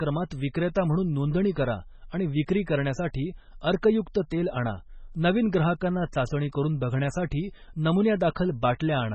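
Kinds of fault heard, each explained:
MP3 compression: treble ends abruptly at 8.3 kHz, a flat ceiling on the spectrogram, with heavy watery, swirly damage, likely from very low-bitrate encoding near 16 kbps.
pre-echo: at 8.79 s a short hiss about 11 ms long precedes an attack, visible as a smear of noise just before the waveform's sharp onset.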